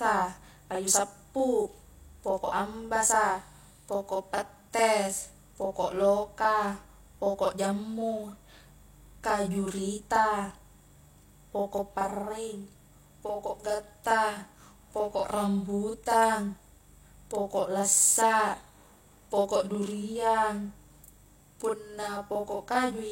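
Throughout the speech there is a doubled quality, as if every syllable were followed immediately by a second copy of itself at equal strength, forming a tight slap. The fault is a channel delay (doubling): one channel arrives about 40 ms behind the other, and when the two are folded down to mono the late copy sits just far enough back to be heard as a separate repeat rather than blending in.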